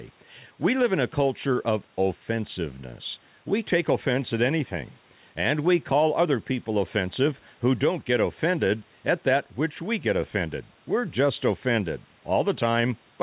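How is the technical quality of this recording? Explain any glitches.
The recording has one fault, gain pumping, which runs through the whole speech clip. The input gain is likely set far too high, so a fast limiter clamps down on each loud syllable. The gain swings by roughly 5 dB, which leaves the level flattened and squashed. Underneath, the room noise sits about 38 dB below the speech, and nothing is heard above 4 kHz, which fits a narrowband telephone codec on a call path.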